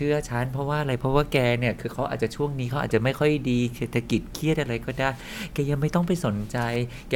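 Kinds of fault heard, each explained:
No technical faults are audible in this recording.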